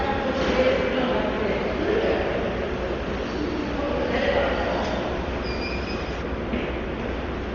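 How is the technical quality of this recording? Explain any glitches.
Technical quality is poor. Heavy coding damage runs through the whole clip, and the last stretch gets an extra treble loss.

Throughout, a very low-bitrate codec, likely Dolby Digital compression at a rate that fits about 32 kbps, has narrowed the band and starved many frequency lines of bits. Nothing remains above 7 kHz, so the sound is dull, with rough, fluttering noise filling in around tonal parts.

From 6.2 s to the end, de-emphasis was applied wrongly. A treble cut meant to reverse pre-emphasis hit audio that never had any, or was applied twice, so the response slopes smoothly downward, about 11 dB lower at 10 kHz than at 1 kHz. The ending sounds more muffled.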